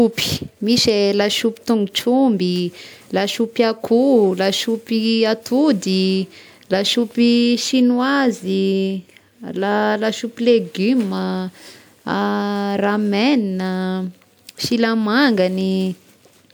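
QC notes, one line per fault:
No audible faults found.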